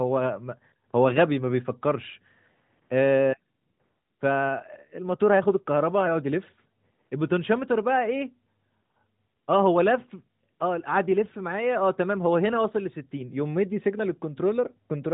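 No technical faults are audible.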